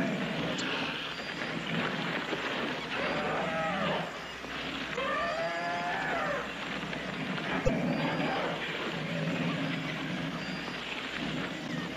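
At 0.56, 4.93, 7.64 and 11.64 s you get a short glitch, each one lasting about 56 ms. That's damaged data in a compressed stream: a run of bytes in the encoded file went bad, so the decoder couldn't make sense of those frames, lost its place and had to hunt for the next valid frame header before it could carry on. Each time it comes out as a brief chirp, squawk, click or hole in the sound.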